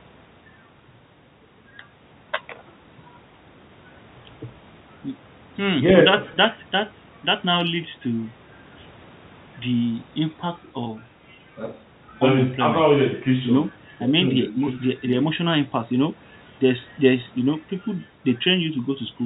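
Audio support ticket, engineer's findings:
Brief held, buzzy tone at 6.34–6.36 s, about 20 ms, where the speech seems to stall on one pitch. Packet loss with pitch repetition: the receiver bridged a gap, consistent with one 20 ms packet, by looping the last pitch period. Band-limited G.711 telephone coding is audible throughout.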